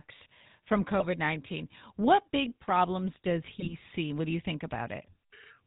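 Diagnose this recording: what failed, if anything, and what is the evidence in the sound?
The codec stage failed. The whole speech clip carries the buzzy, gravelly roughness of the GSM full-rate codec. Nothing comes through above 4 kHz, so the top end is gone. The damage is plainly audible. The coder models the vocal tract and excites it with regularly spaced pulses. It keeps only every third excitation sample. That coarse excitation produces the buzz. The sound points to the original 13 kbps GSM full-rate coding.

The network stage also failed, with GSM bit errors in two bursts. The first runs from 1.00 to 1.07 s. The second runs from 3.60 to 3.74 s. Each breaks into squawks, pops and gargling. Flipped bits reached the decoder. Corrupted filter, pitch or gain values warped the spectrum or pushed the level up frame after frame. The bursts fit about three and two hit frames, respectively.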